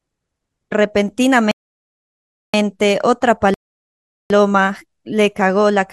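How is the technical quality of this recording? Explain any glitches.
Two rebuffering stalls interrupt the speech. The first runs from 1.51 to 2.54 s and adds about 1.02 s; the second runs from 3.54 to 4.30 s and adds 0.76 s. Each time the player exhausted its downloaded audio, so the sound drops to silence, then resumes exactly where it stopped, with nothing lost.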